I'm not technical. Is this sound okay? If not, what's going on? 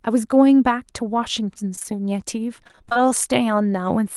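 No, there are two problems, both from bits of the call getting lost on the way.

First, short concealed packet loss at about 1.75, 1.79 and 1.83 seconds, three in a row running to 1.86. Each time roughly 20 milliseconds of audio never arrived, and the receiver papered over it by stretching out the last bit of sound it had. You hear it as a quick smear or little wobble in the speech, and a short sound in there can get swallowed.

Second, repeated packet loss (robotic sound) from about 2.64 to 2.97 seconds. Here the losses keep coming: nine gaps, none longer than about 22 milliseconds, but together close to half of that stretch is patched-in guesswork rather than real audio. Because the fill-ins follow each other so closely, the speech turns choppy, with pieces missing. The call's Opus codec itself is doing its normal job. The trouble is the connection dropping data.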